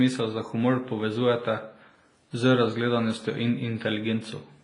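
From start to finish the speech carries a ringing, washy smear with hiss that swells and fades with the signal, and nothing above 10.4 kHz. This is likely WMA compression, heavy damage consistent with roughly 24 kbps, where long transform blocks spread quantisation noise and zero weak components.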